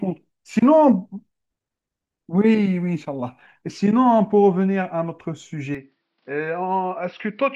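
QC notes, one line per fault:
5.75–7.55 s, input switched to a poorer device: the speech abruptly turns duller and about 5 dB quieter, with a faint new noise floor and no gap. The likely cause is a change to a narrower-band microphone. A spectrogram shows energy ending sharply at 5.7 kHz; the waveform steps down.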